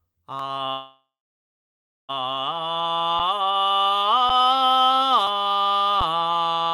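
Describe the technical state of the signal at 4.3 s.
At 4.29 s the music stops for a moment: for about 7 ms the waveform goes flat, so the stop itself is nearly click-free. This is an underrun with held sample. The output buffer ran dry and the converter held its last value until data arrived. Nothing was skipped, and playback resumes where it left off, so the restart is only a soft edge rather than a sharp click.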